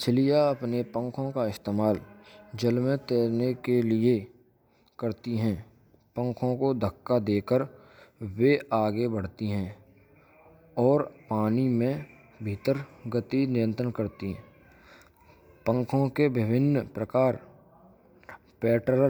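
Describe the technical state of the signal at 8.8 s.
At 8.8 s the speech signal is intact, with no audible fault at that moment.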